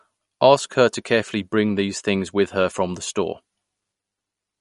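Speech, with MP3 compression damage throughout. Nothing is heard above 11.2 kHz, and the sound turns plainly watery and swirly. This likely points to a low bitrate near 51 kbps.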